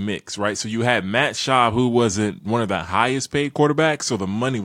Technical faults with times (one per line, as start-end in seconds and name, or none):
none